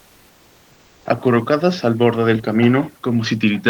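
From 0.00 to 1.05 s, before the speech begins, the room's background is replaced by comfort noise: a steady, featureless hiss about 4 dB quieter than the real room noise, which sits about 38 dB below the speech. The likely cause is discontinuous transmission, such as Opus DTX, which stops sending audio during non-speech and has the receiver synthesise noise instead. Unlike a noise gate, which would drop to near silence, this gap stays filled but loses all texture.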